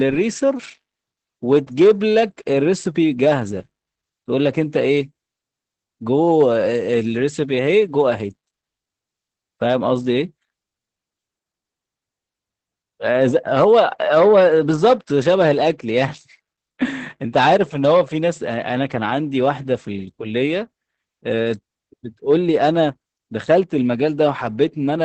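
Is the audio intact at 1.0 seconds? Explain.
No. At 1.0 seconds, as throughout the clip, Opus voice compression is running in its SILK speech mode at a rate that fits roughly 12 kbps. The band stops near 8.5 kHz and the excitation is coarsely coded, so the speech sounds muffled, hoarse and slightly robotic.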